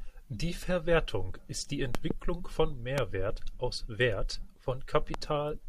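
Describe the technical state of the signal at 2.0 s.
Two loud pops follow "ist die" at 1.95–2.13 s, about 20 dB above the speech, likely a voltage spike; unlike a dropout, speech continues underneath.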